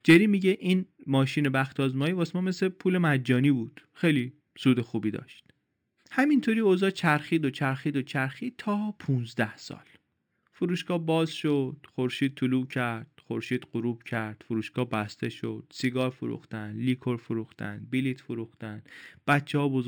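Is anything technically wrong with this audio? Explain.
Yes. The speech carries imaging from linear upsampling throughout. The rate was raised by interpolating straight lines between samples, a weak anti-imaging filter, and the spectrum points to a conversion from 12 kHz to 48 kHz. The top of the band, just below 6 kHz, is dulled, and a mirrored copy of the band sits between 6 and 12 kHz, roughly 30 dB below the signal, adding a faint metallic shimmer on sibilants.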